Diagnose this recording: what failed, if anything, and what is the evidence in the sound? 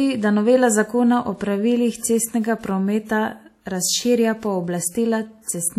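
Codec stage, from start to finish: the speech rings and sounds washy, the hiss breathes with the voice, and nothing survives above 15.8 kHz. That's likely WMA compression, its long transform blocks smearing quantisation noise over tens of milliseconds, which fits a bitrate around 48 kbps.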